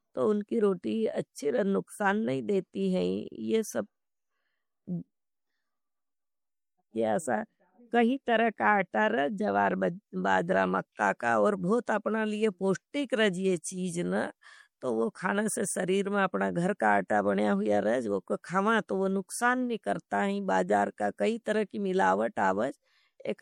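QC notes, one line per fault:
Throughout: MP3 compression, likely at a low bitrate around 64 kbps. Speech carries plainly audible watery, swirling texture and metallic chirps on s sounds, as weak frequency lines drop in and out between frames; nothing sits above 20 kHz, where the treble is cut.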